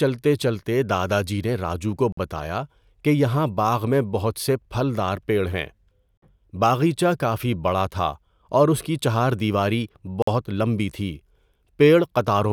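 Speech delivered in 4-second chunks with a gap between chunks: 50 ms silences cut in at 2.12 s (after "جی نے راجو کو"), 6.17 s (before "باغیچہ کافی بڑا تھا") and 10.22 s (after "اس کی چہار دیواری").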